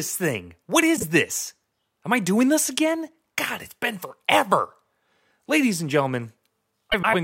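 At 0.96 to 1.04 s, and again at 6.92 to 7.15 s, frames out of order: two neighbouring blocks of coded speech reached the decoder swapped and were played back that way. The first swap exchanges halves of about 26 ms each, a single-frame-sized block. The second exchanges halves of about 105 ms, which fits runs of several frames. Each spot is a brief garbled flutter, and no time goes missing.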